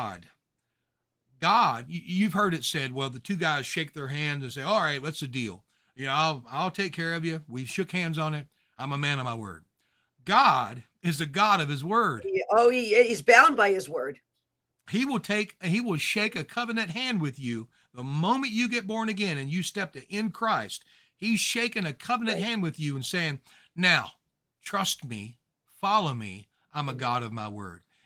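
No technical faults occur anywhere in this speech recording.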